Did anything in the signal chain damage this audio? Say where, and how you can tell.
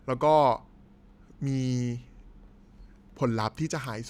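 No, the chain did no damage.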